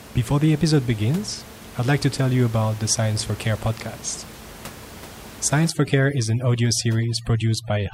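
From 5.70 s to the end, overdone noise removal sets in: bands near the noise estimate, sitting about 19 dB below the speech, are pushed to near silence, leaving twinkling specks. A spectrogram shows scattered isolated dots and ragged, patchy harmonics.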